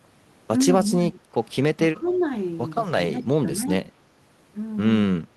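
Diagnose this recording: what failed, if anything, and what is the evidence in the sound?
Speech suppressed in double talk, in the call processing. The speech dips at 1.11–1.22, 1.95–2.11, 3.10–3.27 and 3.57–3.70 s, by about 10 dB in the first two and about 5 dB later. The likely cause is the echo suppressor ducking while both ends talk. These are partial level dips rather than the hard silent gaps of packet loss.

Echo leak, also in the call processing. From 2.07 to 2.21 s a faint copy of the speech returns 239 ms late, about 25 dB below the direct sound. It is likely residual loudspeaker echo that the canceller missed. Room reverberation would give a diffuse tail, while this is a distinct delayed repeat.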